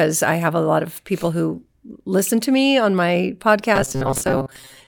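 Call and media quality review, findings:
Robotic sound from repeated short buffers, 3.76–4.87 s, through the end of the clip. The speech becomes a rigid metallic buzz near 133 Hz that still loosely tracks the speech. Likely a starved playout buffer: late audio covered by looping the last ~7.5 ms segment, so about half the real signal is skipped.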